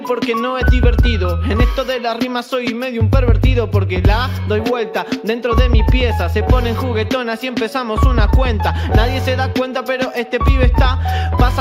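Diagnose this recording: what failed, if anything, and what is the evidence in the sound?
No failure can be heard at any stage, from analogue wiring through conversion, buffering, processing, transmission, storage and playback, so there is no evidence to report.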